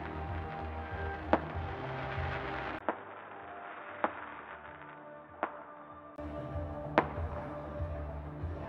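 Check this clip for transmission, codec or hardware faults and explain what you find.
One fault stands out: from 2.79 to 6.18 s the sound turns dull and boxy, then clears again, the likely cause being the input switched to a poorer device. The narrower path passes nothing above 3.8 kHz, so a spectrogram shows the upper band cut flat across that span. A 20 ms gap marks the switch. The waveform drops by roughly 10 dB, and a different background noise sits well below the signal.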